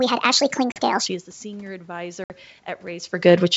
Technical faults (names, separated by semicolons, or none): section at the wrong speed; packet loss on an ADPCM call